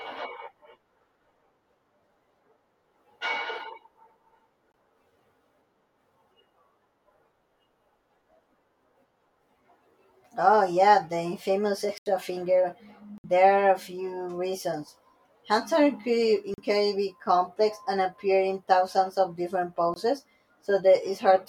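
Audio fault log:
4.72, 11.98, 13.18, 16.54 and 19.94 s, block of digital silence: 20 to 80 ms of samples dropped to zeros with no fade, heard as ticks or brief holes.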